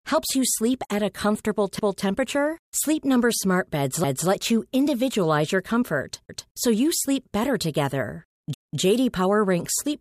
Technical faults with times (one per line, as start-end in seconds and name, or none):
1.79-2.04 overlapping chunks
6.29-6.54 overlapping chunks
8.54-8.79 overlapping chunks